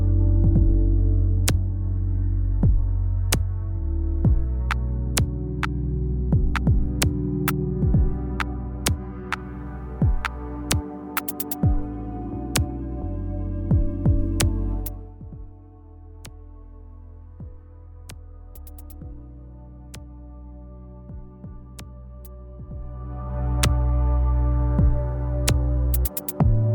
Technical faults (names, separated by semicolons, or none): zipper noise